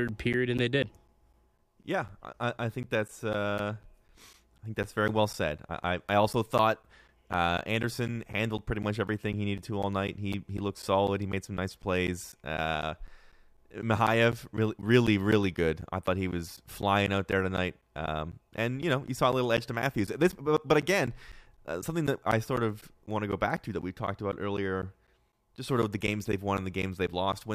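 From 0.08 s to 27.33 s the speech carries periodic USB or driver dropouts. Every 0.25 s something stalls the audio path. Around 10 ms of sound drops to silence. The result is a steady tick, four per second, heard over the speech, about a hundred in all.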